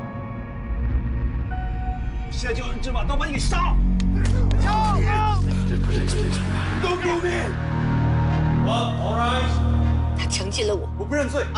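No technical faults are audible.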